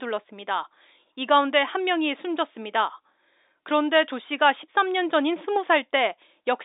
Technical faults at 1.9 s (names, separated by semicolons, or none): none